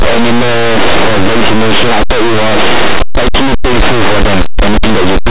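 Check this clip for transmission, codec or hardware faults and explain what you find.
One fault runs through the whole clip: linear audio read as companded. The speech was stored as plain linear 8-bit samples, but the playback side decoded them as mu-law codes. Each byte is expanded through the mu-law curve instead of being taken at face value. Samples sitting just to one side of zero map to the loudest output codes, while those just across zero stay tiny. The result is very loud, harsh distortion from start to finish. The underlying 8-bit linear storage is not itself at fault.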